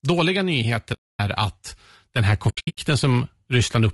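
Throughout this speech clip the voice sounds rough and grainy, with a hiss-like fill between the harmonics and a thin, somewhat synthetic top end. That points to low-delay AAC compression, likely AAC-ELD of the kind used for video calls, at a low rate of around 32 kbps. At that low rate the encoder runs short of bits and substitutes noise where harmonic detail should be. The sound also drops out twice with AAC frame loss with muting. From 0.93 to 1.20 s there is a single soft-edged hole of about 260 ms, fading out and back in, which fits roughly 13 lost 20 ms frames whose spectrum the decoder zeroed, with the overlapping windows smoothing the edges. Just after "den här", from 2.49 to 2.78 s, the damage is broken up instead: about 240 ms goes missing in several short gaps spread over 280 ms, the longest under a tenth of a second, giving a fluttering, stuttered stretch rather than one clean silence.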